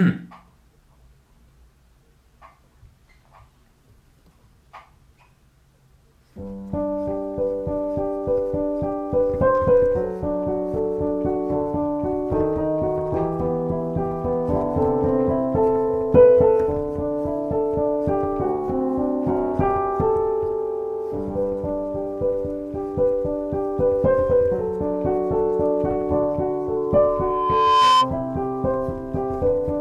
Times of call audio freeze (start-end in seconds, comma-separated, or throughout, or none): none